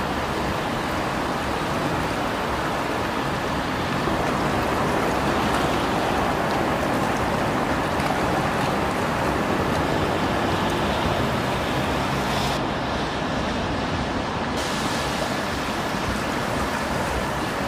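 From 12.57 to 14.57 s, de-emphasis is applied wrongly. A treble cut meant to reverse pre-emphasis has landed on audio that never had any, or it has been applied a second time. The response falls away smoothly as frequency rises. At 10 kHz it sits about 14 dB below the level at 1 kHz. For those two seconds the sound turns dull and muffled, and the top end is pulled back.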